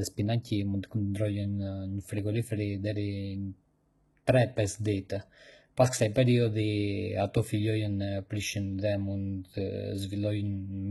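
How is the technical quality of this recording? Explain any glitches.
Quality's rough: the speech carries heavy coding damage all the way through. Likely HE-AAC compression at a very low bitrate, around 16 kbps. Treble is rebuilt from copied lower bands, so sibilants sound gritty and metallic, with nothing above 11.8 kHz.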